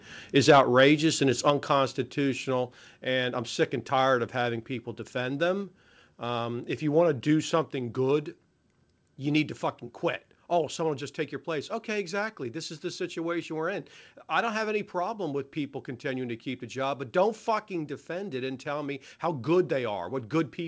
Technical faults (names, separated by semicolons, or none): microphone overload; microphone volume stepped down